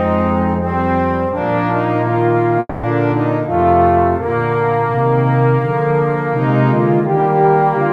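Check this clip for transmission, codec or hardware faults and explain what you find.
One transmission fault is audible. From 2.59 s to 2.86 s there is a long network dropout: the sound breaks off, and for roughly 240 ms the receiver stretches the last audio it had into a fading buzz, followed by about 20 ms of silence. Playback then resumes further on, skipping about 240 ms of the original. This pattern is most likely caused by a run of lost packets that the receiver's concealment could only cover briefly.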